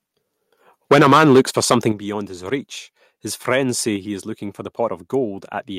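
From 0.91 to 1.87 s the speech has a harsh, crackling edge on its loudest syllables. This is microphone overload: peaks run about 10 dB past the converter's limit, likely from an input volume set too high. A noticeable share of samples have their tops cut off flat. The grit rides on the peaks themselves, so it differs from a simple level change.

At 0.92 s, as the distortion begins, the microphone volume is stepped down by about 4 dB. At 1.92 s, just before "beyond his reach his", it is stepped down again by about 9 dB. Both are likely the call software reacting to the clipping by lowering the device's input volume. Voice and background fall together in a single clean step with no added crackle. That sets these apart from the overload itself.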